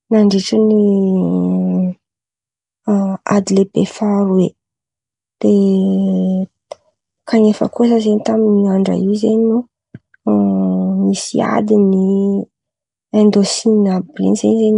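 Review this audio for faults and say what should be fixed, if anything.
Across the whole recording the speech carries a rough, hissy halo and a smeared, underwater quality, with plainly audible damage and nothing above about 10.6 kHz. The likely cause is Nellymoser compression, the old Flash microphone codec, run at a rate that fits about 44 kbps. It codes short fixed blocks with a very small bit budget, so weak bands get no bits and are filled with noise, which produces the hiss and blur. To prevent this, capture and deliver the speech with a modern codec such as Opus or AAC at an adequate bitrate instead of Nellymoser.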